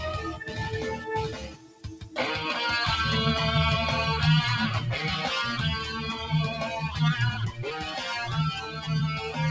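Noise suppressor applied to music or sounds, throughout: a speech-tuned suppressor treats sustained tones and tails as noise, so the level swings by around 10 dB and the sound pumps and thins. Sound cut by the noise suppressor at 0.29–0.56 s (down about 9 dB), 1.29–2.17 s (about 14 dB) and 8.57–8.89 s (about 7 dB): these steadier passages are mistaken for noise and pushed down, sinking audibly while sharper onsets survive. Nothing above 8 kHz comes through the call path, which fits a G.722 wideband codec.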